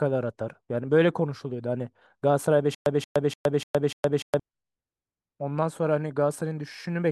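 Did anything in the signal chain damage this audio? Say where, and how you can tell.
Yes. From 2.75 to 4.40 s the speech breaks into a stutter with silent gaps. The same short burst, about 179 ms long, plays five times. Each repeat is followed by about 116 ms of digital silence, so the burst returns every 295 ms at a steady pace. That even rhythm points to the playback or streaming buffer. The likely cause is a stalled player replaying its last fragment at each retry before running dry. The speech that belonged in that span is lost.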